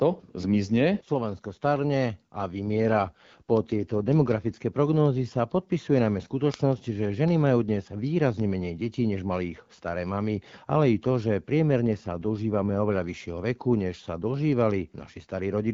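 From 2.66 to 4.54 s the speech turns rougher and more synthetic, then clears, and the same coarsening returns from 11.86 to 13.02 s. Both are an AMR rate drop: the wideband AMR-WB coder, which sounds clear with only light coding wear at its normal rate near 12.65 kbit/s, falls back to a lower mode, which fits 8.85 kbit/s, and gives up detail for error protection. The bandwidth stays the same and the sound never breaks off.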